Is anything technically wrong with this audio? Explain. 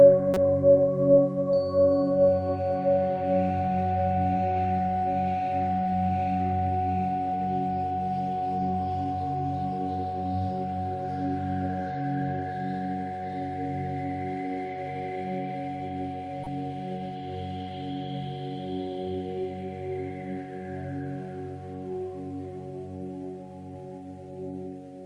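Yes. A corrupt frame decoded appears twice, at 0.34 to 0.37 s and at 16.44 to 16.47 s. Flipped bits in the compressed data were played back anyway, misplacing energy in frequency for about two frames at the first spot and three at the second. Each is heard as a brief chirp, squeak, blip or noise burst, the first louder than the second.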